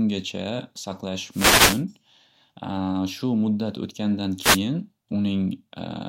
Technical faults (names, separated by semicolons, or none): wireless microphone noise hit